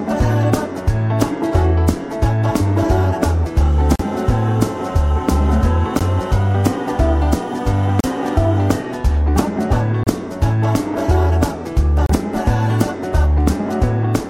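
At 3.96, 5.99, 8.00, 10.04 and 12.06 s the sound drops out for roughly 16 to 40 ms with hard edges. These are gaps between stream segments, recurring every 2 s, where mismatched time stamps left holes the player filled with silence. No audio is lost.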